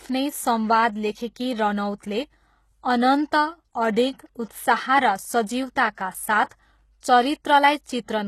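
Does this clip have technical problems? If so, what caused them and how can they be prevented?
Yes. The speech has been squeezed through a very low-bitrate coder, most likely HE-AAC compression. The coder keeps only the lower spectrum and rebuilds the treble by copying lower bands upward under a coarse envelope, so the regenerated top does not match the real harmonics. The damage is plainly audible: s sounds turn gritty and metallic, and nothing survives above 12.3 kHz, which fits a rate around 16 kbps. Encoding at a higher bitrate with plain AAC or Opus prevents this.

Two pre-echo events come from the same transform coding. When a sharp onset lands late in a coding block, the quantisation noise sized for the loud part spreads back across the quiet stretch before it. A short hiss runs ahead of the attack from 6.49 to 6.51 s, spreading about 21 ms, and again from 7.84 to 7.86 s, about 23 ms, leaving both onsets softened. 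Giving the coder more bits or allowing shorter transform blocks prevents it.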